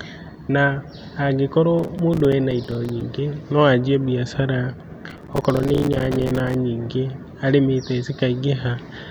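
A speech clip with two bursts of processor overload crackle, from 1.79 to 3.01 s just before "no anjie mbiacara" and from 5.10 to 6.55 s right after it. The second is much denser. Each burst is a string of tiny silent gaps with hard edges, which fits audio buffers of around 5 ms repeatedly missing their deadline. Unlike a single dropout, the grit is many short gaps clustered together, and it stops cleanly once the load eases.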